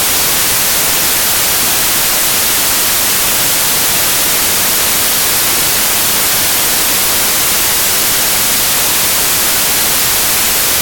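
Samples built from the wrong bytes affect the whole clip, from start to finish. Each sample has been assembled from its bytes incorrectly, whether from a one-byte offset, reversed byte order or a mismatched alignment, so the rapidly fluctuating low-order bits end up as the most significant part of every value. The result is a loud, harsh wash of broadband noise over the entire sound, close to white on the louder passages.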